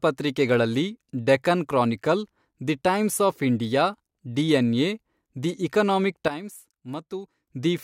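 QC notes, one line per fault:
6.28–7.47 s, sudden gain jump: right after "ಇಂಡಿಯಾ ಡಿಎನ್ಎ ದಿ ಎಕನಾಮಿಕ್" the speech and background noise drop together by about 12 dB in a single step with no fade, then return at 7.47 s, likely from a gain change applied without a ramp.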